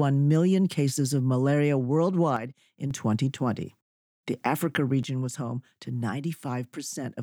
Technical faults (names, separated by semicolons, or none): one channel drops out